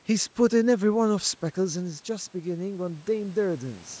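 Speech with automatic gain rising from 1.09 s to 3.92 s: after the input falls about 9 dB as the talker moves back near 1.5 s, the gain creeps up about 5 dB, lifting voice and room noise together. The waveform envelope climbs gradually, and the spectrogram brightens below 8 kHz.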